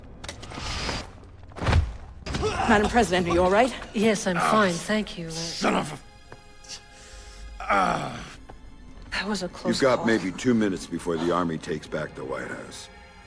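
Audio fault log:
No audible faults detected.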